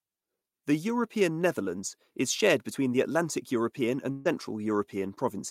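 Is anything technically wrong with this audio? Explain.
Yes. At 4.11 to 4.27 s, a burst of packet loss: about 140 ms of speech never arrived, so the receiver stretched the last sound and faded it out before speech resumed later on.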